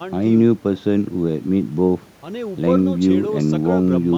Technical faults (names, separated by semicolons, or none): none